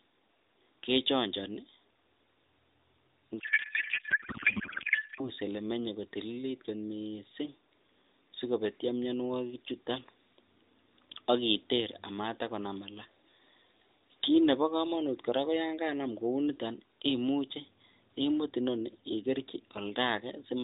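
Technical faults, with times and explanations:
3.40 to 5.31 s, codec payload misread: the speech collapses into garbled noise and warble that barely follows it. The decoder is reading AMR narrowband frames with their fields in the wrong places, which fits octet-aligned packing being parsed as bandwidth-efficient.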